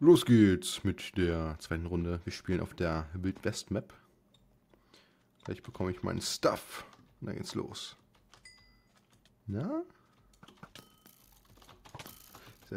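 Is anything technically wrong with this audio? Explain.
No, nothing is technically wrong with this audio.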